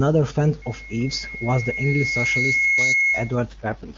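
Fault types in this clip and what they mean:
loudspeaker feedback squeal: A steady 2.2 kHz tone swells over roughly two seconds from 0.62 s until it sits somewhat above the speech, then cuts off at 3.36 s. The microphone picks up its own loudspeaker, and the loop gain exceeds one at that pitch.
AMR rate drop: From 3.49 s to the end the speech turns rough and synthetic, with no gap or narrowing of the band. The AMR-WB stream steps down from 23.85 to 6.6 kbit/s, its lowest rate, trading detail for error protection.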